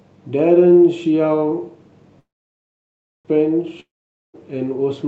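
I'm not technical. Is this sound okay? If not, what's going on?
No. From 2.19 to 3.27 s the speech stops, with a brief fading buzz and then about a second of silence, before carrying on exactly where it left off. This is a call audio freeze: the call's data was likely held up in transit, so the listener's end ran out of sound and waited, and nothing was lost.

From 3.80 to 4.36 s there is another short buzz, then near silence, and the speech resumes with about half a second skipped. This is a long network dropout: the sound for that stretch likely never arrived, so that part is simply gone.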